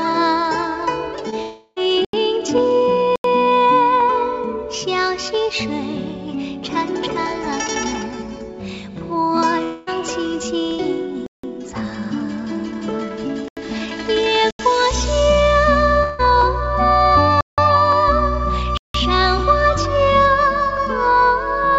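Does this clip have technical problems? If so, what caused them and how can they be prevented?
Yes, there are four kinds of fault here.

Clock drift buffer slips: from 1.15 s to the end there's a click every 1.34 s. It's likely two clocks disagreeing by around 150 ppm, so a handful of samples gets dropped or repeated each time. Locking both devices to one clock, or resampling adaptively, prevents it.

Short concealed packet loss: at 1.30–1.34 s the receiver patched a 20 ms hole by continuing the previous sound, which gives a brief smear. Better jitter buffering or forward error correction on the link helps.

Long network dropout: at 1.42–1.78 s, 9.63–9.89 s and 16.03–16.21 s the sound turns into a fading, smeared continuation lasting 340, 240 and 160 ms. That's likely the network stalling, with concealment filling the gaps. A steadier connection or redundancy such as FEC would prevent it.

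Block of digital silence: there are hard cuts to silence at 2.05, 3.16, 11.26, 13.48, 14.51, 17.41 and 18.77 s. They last 85 or 171 ms, which fits whole 4096- or 8192-sample buffers not being filled in time. Larger buffers or a lighter processing load would stop the underruns.

The G.722 call path itself cuts everything above 8 kHz, which is expected for that codec.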